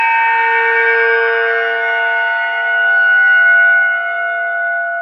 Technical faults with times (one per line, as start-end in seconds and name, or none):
0.00-2.56 crude rate conversion